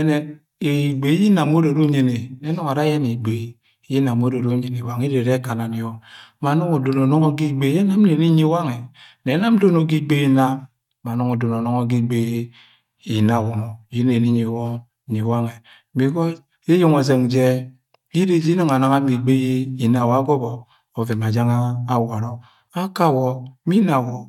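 No technical faults can be heard anywhere in the speech, and the signal holds steady throughout with no audible disruption.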